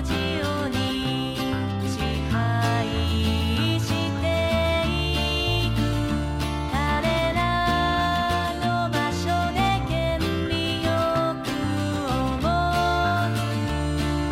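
No technical faults can be heard anywhere in the audio, and the signal holds steady throughout without any disruption or damage.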